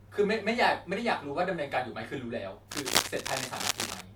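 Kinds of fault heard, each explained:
Cable scratch noise: From 2.72 s to 4.01 s, dense, uneven bursts of crackle and rustle sit on top of the speech. They come and go irregularly, as scratching rather than a steady hiss. At their peak they are roughly as loud as the speech itself. The likely cause is a worn cable, connector or control being moved. Its contact resistance changes quickly, and each change leaks a burst of noise into the signal.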